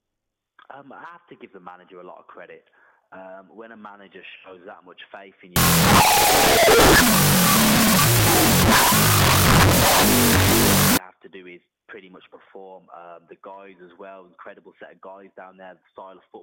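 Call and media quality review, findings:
Wrong sample width, 5.56–10.97 s: loud noise swamping the audio, which is still faintly audible underneath, half speed and an octave low. Sounds like 16-bit samples getting read as unsigned 8-bit in the decode path, each byte becoming its own sample.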